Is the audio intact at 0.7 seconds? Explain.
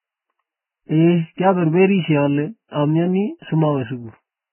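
No. At 0.7 s, as throughout the clip, the speech carries heavy damage, likely from Vorbis compression at a very low bitrate, around 9 kbps. Nothing survives above 3 kHz, and the coarsely quantised treble turns to hiss and grain, with blurred consonant attacks. A spectrogram shows a hard ceiling at 3 kHz and smeared, noisy texture beneath it.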